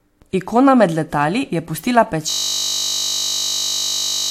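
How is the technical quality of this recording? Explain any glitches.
The technical quality is poor: the whole recording carries mixed compression artefacts, and the last half collapses into a frozen buzz.

Throughout, nothing is present above about 16.6 kHz, and two different flavours of compression smear sit together. The likely cause is transcoding between lossy codecs, a WMA-style encode later re-encoded to AAC-LC. Each stage adds its own artefacts on top of the previous one's. A single encode would leave one consistent texture.

From 2.30 s, right after "med letali je pustila", to the very end, a system hang loop takes over. The sound card kept replaying one 20 ms buffer while the system froze, so an identical fragment repeats at 50 Hz and is heard as a steady buzz. Unlike a dropout or stutter, it never recovers.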